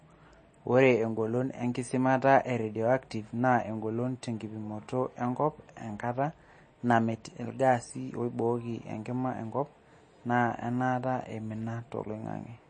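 Throughout the speech, the treble stops dead at about 9 kHz, and the sound has a watery, swirly quality with chirpy s sounds. This is likely MP3 compression at a low bitrate, around 32 kbps. The encoder discards the top band and weak frequency lines flicker between frames.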